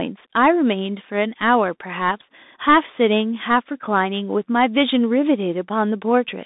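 From start to end, the speech passes through a Bluetooth CVSD headset codec. The band runs only from about 200 Hz to 3.7 kHz, so the sound is thin and boxy. CVSD sends one bit per sample, marking each step as up or down, and adapts its step size. The damage is plainly audible. Fast, loud high sounds outrun the step and distort. The s sounds turn scratchy. A granular hiss sits beneath the speech, which fits a 64 kbps headset link.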